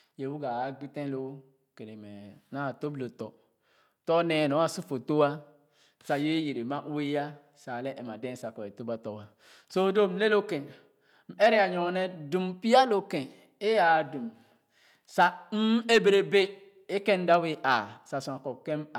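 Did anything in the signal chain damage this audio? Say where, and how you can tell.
No, nothing along the signal chain has left an audible mark on this speech recording.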